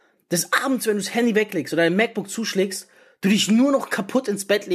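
No technical faults can be heard in this recording.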